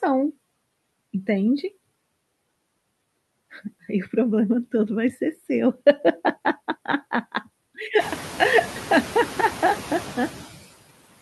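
Speech runs through noise suppressor artifacts for its full length: the suppressor pulls steady noise down by about 19 dB between words and lets it back up under them, so a spectrogram shows a noise floor that gaps and refills with each phrase. Room noise rises by about 18 dB at around 8 s and then sits about 15 dB below the speech.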